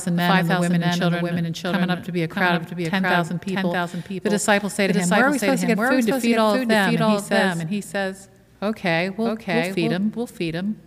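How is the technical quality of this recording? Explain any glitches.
The recording has one clear problem. A doubled audio track runs throughout. A second copy, about 5 dB quieter, trails about 0.7 s behind, full-band and dry. It is likely captured twice through a slower path.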